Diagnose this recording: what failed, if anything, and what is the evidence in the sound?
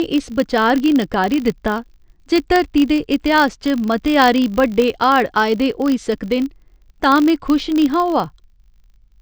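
A filter restarted on every block in the processing stage: a 50 Hz buzz runs throughout, tracking the speech level, unlike mains hum, which persists through silence.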